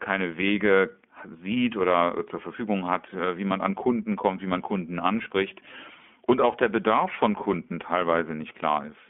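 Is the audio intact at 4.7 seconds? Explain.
No. iLBC codec damage runs throughout: a 200 Hz to 3.4 kHz band and a rough, synthetic texture from independently coded frames, unlike the smoother dullness of a plain low-pass filter.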